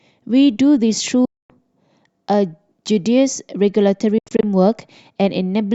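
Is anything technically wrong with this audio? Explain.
Yes. This speech has gaps at 1.25 to 1.50 s, a single hole of about 244 ms, and at 4.18 to 4.43 s, where about 142 ms vanishes in short bursts, the longest 81 ms. These are likely Bluetooth dropouts: late packets were discarded, so output stopped, then resumed further along. The waveform flat-lines, and the spectrogram shows blank vertical bands.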